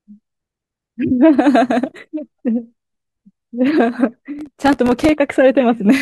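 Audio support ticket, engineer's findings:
Processor overload crackle, 4.39–5.09 s: audio thread missing buffer deadlines repeatedly, each miss leaving a short silent gap. Roughly 1.5 ms buffers, about thirty misses heard as gritty crackle over the speech.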